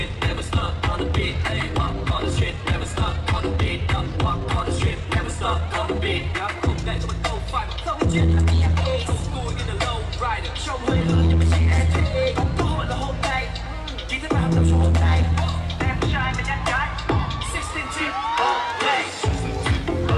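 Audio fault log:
0.0–9.42 s, time-stretched section: the audio runs 1.4 times faster with unchanged pitch, sounding rushed until the pace shifts abruptly at 9.42 s. Likely software squeezed this stretch to a target length, dropping short pieces to preserve pitch.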